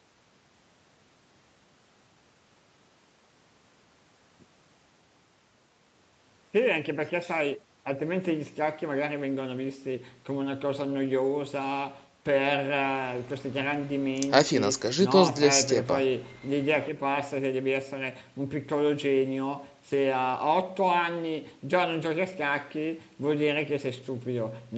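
No technical faults are audible.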